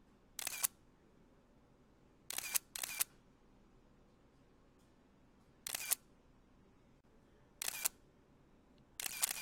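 At 7.01 s the continuous sound drops out for about 32 ms, until 7.04 s, then resumes exactly where it left off. This is a gap at a join of encoded pieces: two separately encoded sections were butted together without trimming, so the encoder's start-up delay and the padding of the previous section's final frame both survive as silence. On a waveform it is a short flat run with smeared edges; a spectrogram shows a narrow blank vertical stripe across all frequencies.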